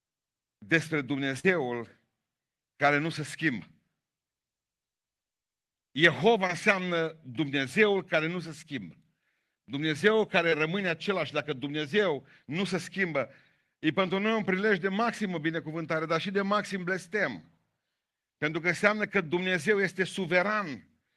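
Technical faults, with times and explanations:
1.39 s, 6.47 s, 9.55 s and 10.50 s: short concealed packet loss. Roughly 40 ms at 1.39 s and 20 ms at each later point missed decoding, so the receiver extended the preceding speech and blended back, leaving brief smears or wobbles.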